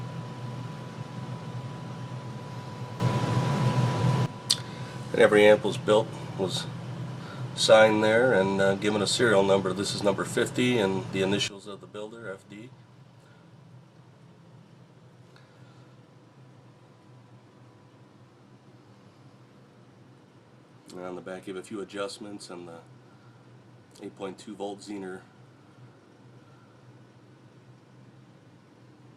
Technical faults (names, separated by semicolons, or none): sudden gain jump